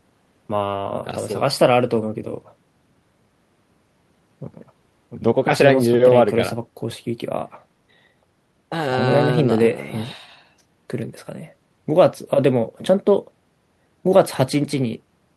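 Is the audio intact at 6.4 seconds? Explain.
Yes, at 6.4 seconds the speech runs through cleanly, with no dropout, click, glitch or other technical fault at that point.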